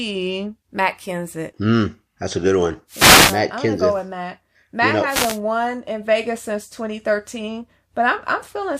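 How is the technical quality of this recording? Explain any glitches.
Two short glitches interrupt the speech, both wireless microphone noise hits. The first runs from 2.88 to 3.42 s, after "that's a good one". The second runs from 5.07 to 5.40 s, after "you know". Each time, the microphone's radio signal fades as reflections cancel it. Receiver noise then rises, heard as a brief swish of static over the voice.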